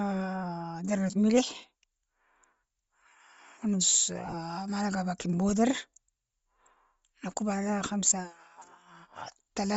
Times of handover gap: none

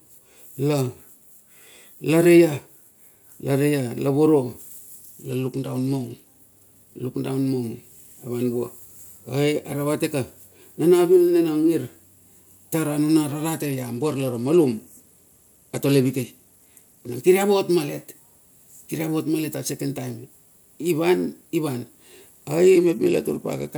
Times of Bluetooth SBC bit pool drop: 5.30-6.36, 13.56-17.19, 22.75-23.78

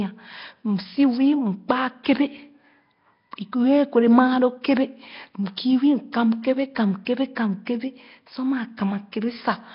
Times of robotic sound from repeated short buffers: none

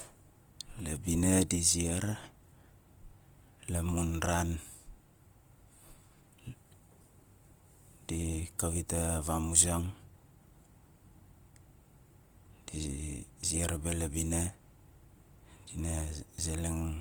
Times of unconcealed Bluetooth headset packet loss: none

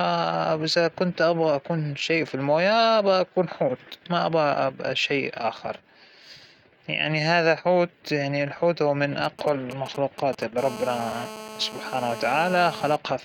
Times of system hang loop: none

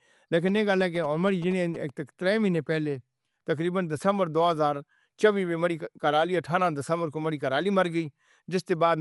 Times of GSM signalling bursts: 0.48-1.90

